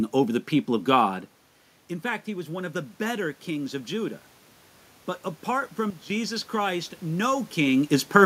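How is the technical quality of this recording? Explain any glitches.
The recording has two level glitches, both in the gain stage rather than at the microphone.

From 2.03 to 4.26 s, speech and room noise swell together. This is automatic gain rising: after the input fell by about 12 dB, the control slowly added about 3 dB.

From 5.90 to 6.10 s, the level abruptly drops by about 13 dB and recovers, noise included. A sudden gain jump, an unramped digital gain change, is the likely cause.

The level shifts near 1 and 7.5 s come from the talker moving relative to the microphone.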